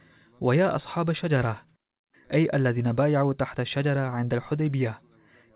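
Nothing stood out on listening to this speech recording.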